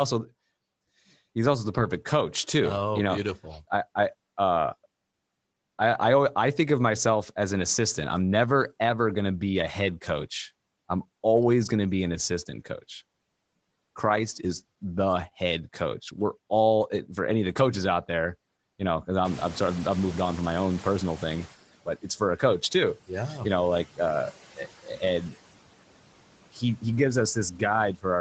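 Throughout the speech the background pumps down between phrases and lifts under them: noise suppressor artifacts, removing about 18 dB of steady noise frame by frame. From 19.24 s, just after "there you know because", the room noise jumps by about 20 dB and comes through only partly reduced, then sinks over 2.3 s until 21.56 s. This is the noise suppressor catching up, its noise estimate lagging before reaching about 13 dB of reduction. Between 26.51 and 26.84 s a brief stretch of speech turns faint and swallowed, dipping by up to about 18 dB over roughly 150 ms in total. Here the noise suppressor cut speech it mistook for background.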